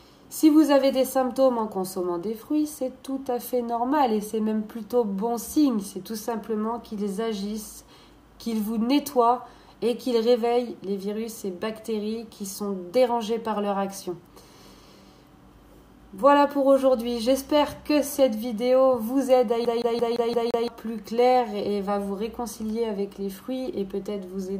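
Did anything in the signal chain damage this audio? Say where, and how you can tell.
Yes: CD stuck on one turn at playback, 19.65 to 20.68 s; the laser jumps back a track six times, repeating a 0.17 s slice with brief mutes.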